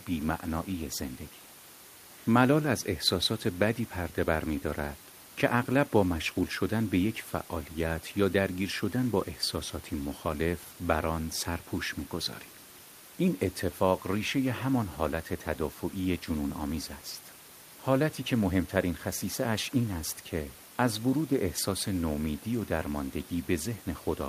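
No technical faults are audible.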